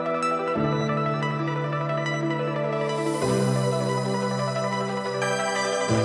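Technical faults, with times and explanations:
Throughout, wrong sample rate: everything runs fast and high, about a fifth up (7.02 semitones) and 1.5 times quicker, because audio captured at 16 kHz is being played back at 24 kHz with no conversion, so speed and pitch rise together.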